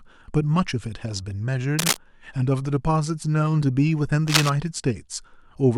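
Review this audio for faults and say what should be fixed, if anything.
Two bursts of cable scratch noise, from 1.79 to 1.97 s and 4.28 to 4.50 s, sit at roughly the same level as the speech. They are likely a worn cable or connector shifting, with its contact resistance jumping around. On a spectrogram they show as ragged broadband smears; on a waveform, as dense, jagged spikes. Replace or reseat the suspect cable and secure it so it cannot move during recording.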